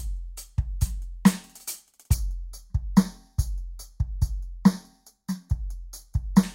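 From 2.14 s to 6.43 s, one channel arrives roughly 0.2 ms behind the other and the pair is folded to mono, producing channel delay (comb filtering). Cancellation carves evenly spaced notches starting around 3 kHz, leaving the music hollow and phasey.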